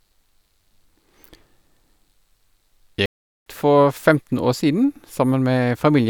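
Speech, with one clear problem: a playback stall from 3.06 to 3.46 s, where the sound just drops out mid-flow for about 0.4 s and then picks up again. That's likely the player starving for data or its thread getting blocked briefly.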